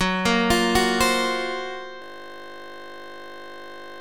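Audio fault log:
2.02 s to end, system hang loop: At 2.02 s the sound stops moving forward. A single 20 ms slice repeats exactly, about a hundred times, until the clip ends. Because the slice is so short, the repeats blur into a steady buzz at 50 Hz, the loop rate. This happens when the computer or its driver freezes. The audio hardware keeps replaying whatever sits in its ring buffer, and the loop length fits a buffer of about 20 ms.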